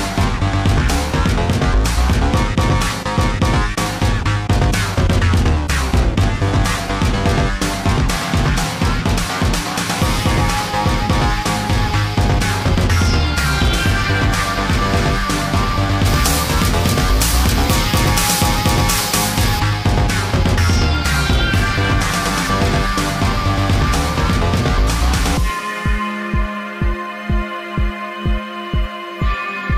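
Pre-emphasis left on, 16.06 to 19.60 s: an uncorrected 50 µs FM treble boost leaves 10 kHz about 11 dB above 1 kHz, making the sound thin and sibilant.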